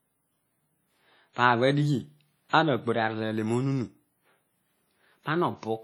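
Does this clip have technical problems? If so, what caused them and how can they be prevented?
Yes. The speech appears to have been passed through a low-bitrate transform codec, likely WMA compression at something like 32 kbps. Coarse quantisation spreads noise across long blocks and drops weaker detail, so the whole clip sounds heavily processed, ringing and washy, with hiss that swells and fades along with the speech. Encoding at a higher bitrate, or keeping a lossless master, would prevent this.

Pre-echo occurs from 2.49 to 2.53 s. A sharp onset landed late in a transform block, so noise sized for the loud attack also filled the quiet gap before it. The result is a short hiss about 42 ms ahead of the attack, which sounds softened and smeared. An encoder that switches to short blocks on transients would avoid it.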